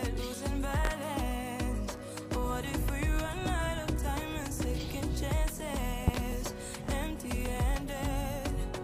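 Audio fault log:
0.85–0.89 s and 6.08–6.18 s, loud pop: a sharp single pop first, then a quick double pop later, each jumping roughly 20 dB above the sound, which carries on underneath. Likely a voltage spike from a plug, switch, static or driver glitch.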